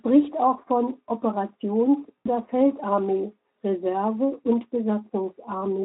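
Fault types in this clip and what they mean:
VoIP packet loss concealed by the speech codec: around 2.18 to 2.27 s, about 80 ms of speech failed to arrive, which fits four 20 ms frames. The Speex decoder extrapolated from its last pitch and filter, leaving a brief stretched, smeared sound that fades.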